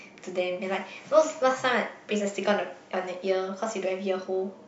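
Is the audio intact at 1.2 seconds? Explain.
Yes, at 1.2 seconds the speech plays through cleanly, with no dropout, click, distortion or other fault to be heard at that moment.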